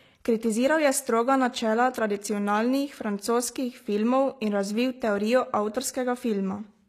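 Likely HE-AAC compression, present from start to finish. The treble sounds plainly artificial. Only the lower spectrum seems to be coded properly, and the upper bands are filled in by copying lower content upward under a coarse envelope. Its harmonics don't line up with the real ones, so s sounds come out gritty, metallic and lisped. The damage fits a low bitrate around 24 kbps, and nothing is present above 14.9 kHz.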